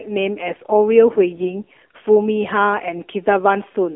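The speech has passed through the AMR narrowband mobile codec. It sounds buzzy and synthetic, which fits a low rate near 7.4 kbps. A spectrogram shows energy only between 300 Hz and 3.4 kHz.

AMR bit errors at 1.34–1.47 s and 2.96–3.05 s turn the voice hoarse and gargly while pitch and level hold. A spectrogram shows smeared, scratchy harmonics, and the waveform keeps its normal envelope.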